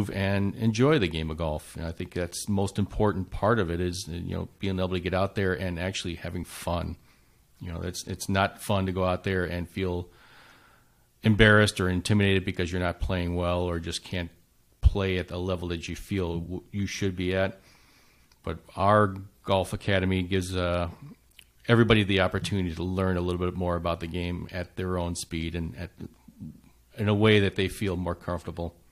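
A speech recording with one overlap between stream segments at 22.40 s: two consecutive segments, which fit a 4.0 s segment length, claim overlapping time stamps, and trimming that overlap removes a few milliseconds of real audio, so the waveform jumps and a tiny skip is heard.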